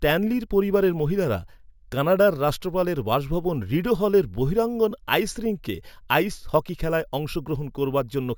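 Throughout: imaging from sample-and-hold upsampling. Samples were repeated, unfiltered, from 16 to 48 kHz, leaving a metallic fizz mirrored into 8–16 kHz, about 22 dB down.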